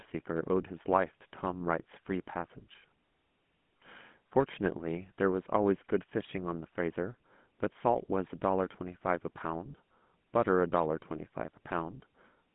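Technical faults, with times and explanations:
Throughout: GSM full-rate codec. The speech is confined to roughly 150 Hz to 3.4 kHz and carries a plainly audible buzzy, gravelly roughness, consistent with a 13 kbps GSM full-rate stream. The codec rebuilds the vocal tract and drives it with coarse, regularly spaced pulses instead of the true excitation.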